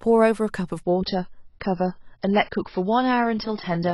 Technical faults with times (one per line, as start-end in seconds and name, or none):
0.83-3.94 adaptive stream at a lower bitrate